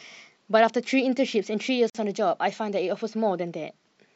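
At about 1.90 s the speech just drops out for roughly 48 ms, ending around 1.95 s, then picks up right where it left off. That's a gap at a join of encoded pieces. The audio was encoded in separate chunks and butted together without trimming, so the encoder's start-up delay and the padding on the last frame both stayed in. You hear a short hole whose edges are smeared by the codec, so the truly silent part is shorter than the full gap.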